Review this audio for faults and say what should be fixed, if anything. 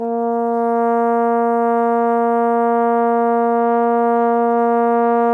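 Nothing stood out on listening to this music, so there is nothing here that needs fixing.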